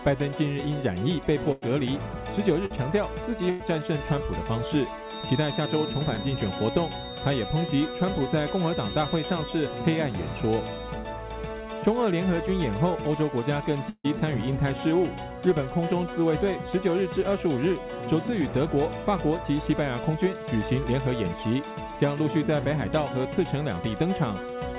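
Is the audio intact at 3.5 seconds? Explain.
No. A burst of packet loss from 3.50 to 3.62 s drops about 100 ms. The receiver stretches the last sound into a fading fill, then resumes further on.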